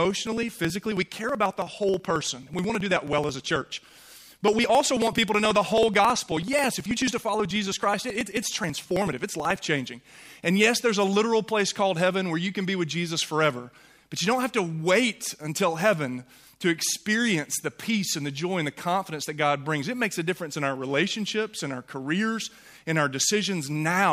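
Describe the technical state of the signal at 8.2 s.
At 8.2 s the audio is inside a run of periodic USB or driver dropouts lasting from 0.05 s to 9.61 s. Every 54 ms something stalls the USB bus or audio driver and about 10 ms of signal is skipped outright. The result is a steady train of ticks, roughly 18 per second, heard only while signal is present.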